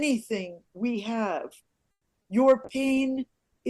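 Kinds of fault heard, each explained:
Call audio freeze: At 1.91 s the sound stops advancing for about 0.15 s. The last sound is carried on briefly and then falls to silence for roughly 100 ms before resuming at 2.06 s. Nothing is skipped, so the audio after the gap picks up where it left off, now about 130 ms later than before. The likely cause is packets held up in transit while the jitter buffer ran dry.
Short concealed packet loss: Between 2.22 and 2.26 s there is a brief smear where about 20 ms of real audio is missing. The receiver covered the hole with about 20 ms of synthesized continuation and then blended back into the real signal. The result is a short wobble rather than a clean dropout. Whatever happened in that instant is replaced by an extrapolation of the preceding sound.
Call bitrate drop: From 2.66 s to the end of the clip the encoder rate falls from 96 kbps to 24 kbps and stays there for about 1.04 s. 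At a quarter of the earlier rate, Opus quantizes more coarsely and trims the upper band. The final second therefore sounds rougher and duller than the audio before it. The drop follows a fall in the call's bandwidth estimate, and no recovery is heard before the clip ends.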